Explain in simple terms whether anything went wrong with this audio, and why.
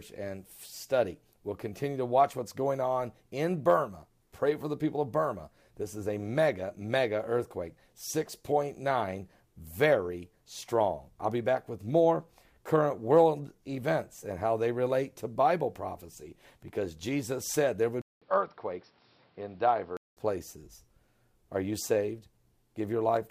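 An input switched to a poorer device from 18.02 to 20.17 s. The sound drops out for about 0.2 s, then comes back duller and boxier, slightly quieter, with faint new background noise, and nothing above 5.6 kHz. The likely cause is the system swapping to a different microphone or a headset's call mode, which carries a narrower range of frequencies and has its own tone and noise.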